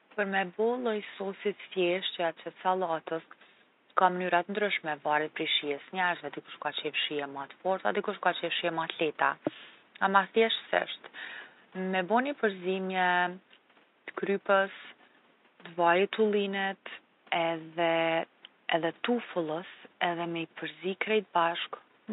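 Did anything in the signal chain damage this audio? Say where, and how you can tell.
No, nothing in the chain seems to have hurt this speech recording; the only extra sound is the room's own quiet background noise, sitting about 36 dB below the speech, which belongs to the space rather than to any stage of the system.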